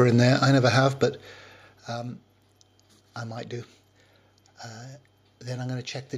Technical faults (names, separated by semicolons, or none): none